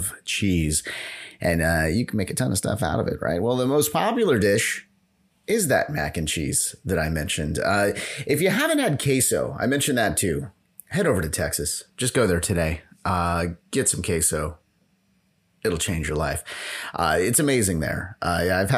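Speech recording with no technical faults detected anywhere in the signal.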